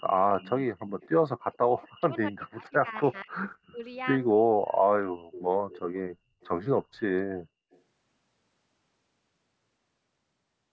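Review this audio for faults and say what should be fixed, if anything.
A faint repeat of the speech trails it by 254 ms at 0.03–0.52, 1.01–1.09, 1.53–1.87, 3.04–3.54, 4.66–5.99, 6.41–6.48 and 7.71–7.8 s, about 20 to 35 dB down. This is likely echo leak from a loudspeaker the canceller didn't fully cancel.

Between 1.86 and 3.82 s the speech dips in pieces, by as much as about 35 dB, for around a second altogether. This is likely speech suppressed in double talk, where the canceller turned down the near talker along with the echo.

To prevent both, the far end should use a headset or better-tuned echo cancellation that converges fully and keeps near speech during overlap.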